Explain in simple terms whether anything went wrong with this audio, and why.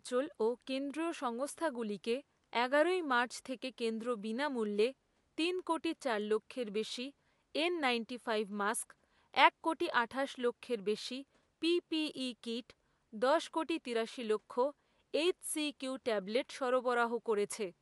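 Nothing went wrong; this recording has no technical faults.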